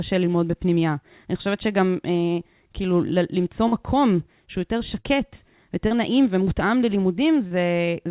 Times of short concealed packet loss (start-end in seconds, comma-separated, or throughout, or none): 3.68-3.75, 5.00-5.06, 5.87-5.94, 7.47-7.54